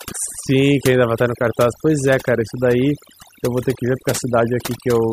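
Overdone noise removal runs through the whole recording, from start to finish. A noise reduction stage was set too aggressively, so any frequency band whose level sits close to its noise estimate gets cut deeply or muted outright. Softer parts of the speech fall below that threshold and vanish along with the noise. The gaps between phrases collapse into near silence dotted with twinkling, chirpy specks.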